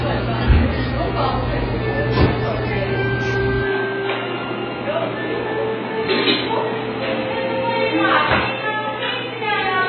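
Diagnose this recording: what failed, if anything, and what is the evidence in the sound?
The codec stage most likely failed: the audio went through AAC compression at a very low bitrate, in the region of 12 kbps. Throughout the clip there is nothing above 6.5 kHz, and the coder's quantisation is heavy. With so few bits per frame, AAC-LC discards the upper bands and coarsely approximates what remains. This produces a dull, smeared sound with a fizzy, warbling texture on sustained content.

At the capture stage, the input switched to a poorer device at 3.63 s and stayed on it to the end. From that moment the band closes further, leaving nothing above 4.2 kHz, and the level drops by about 5 dB. A new background noise sits roughly 35 dB below the signal. There is no gap at the switch, so the tone turns boxier abruptly, consistent with a narrower-band microphone or headset taking over mid-recording.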